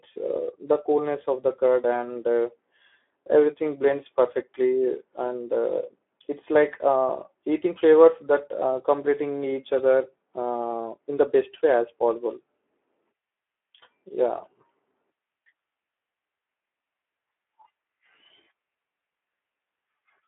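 Throughout this speech recording the sound is hoarse and grainy, with no air or sibilant sparkle at all. It is thin at the bottom too, confined to roughly a telephone band of 250 Hz to 3.4 kHz with nothing above 3.8 kHz. This is Speex codec damage: the CELP coder has too few bits to model the excitation, which fits a low setting around 11 kbps on a narrowband line.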